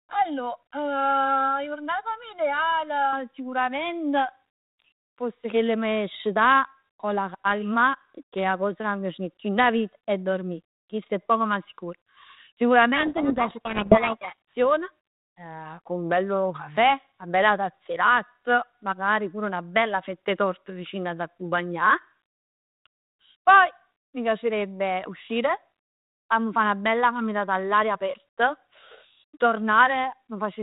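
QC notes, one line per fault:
0.00–3.13 s, channel delay (comb filtering): the opening speech sounds hollow and phasey. One channel runs roughly 1.5 ms behind the other, and when the two are summed to mono, the components they share cancel at evenly spaced frequencies. The first notch falls near 400 Hz, with more following at regular intervals up the band. On a spectrogram this appears as dark horizontal stripes that stay fixed while the speech moves.
12.96–14.53 s, codec payload misread: the speech is buried under harsh, gritty distortion. The receiving side reads the bits of each G.726 code word in the wrong order, so the decoded difference values are wrong. The adaptive predictor then drifts, producing rasping noise. Outside this stretch the 32 kbit/s G.726 path cuts everything above 4 kHz. Within the stretch, the spectrogram shows broadband smear filling the band up to that ceiling, and the waveform turns ragged and noise-like until normal decoding resumes.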